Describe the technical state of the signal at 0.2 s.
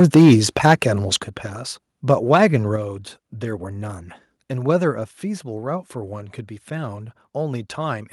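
At 0.2 s the speech is inside a stretch of microphone overload running from 0.0 to 0.74 s. Peaks overshoot the converter's ceiling by about 6 dB, likely because the input level was set too high. Their flattened tops give the loudest syllables a harsh, crackling edge.

Just before, at 0.17 s, the microphone volume steps down by 2 dB. This was likely the call software reacting to the clipping by lowering the input level in one move. Speech and background drop together, abruptly, with the distortion still present afterwards.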